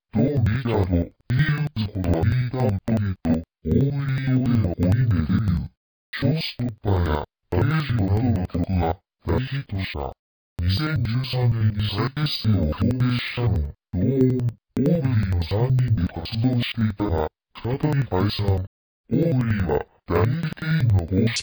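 Interleaved audio read as planar runs throughout: each stretch of alternating left and right samples is split in half, so both halves play at half speed. The sound drops an octave, doubles and chops at about 10.8 Hz, which fits 4096-sample blocks of about 93 ms.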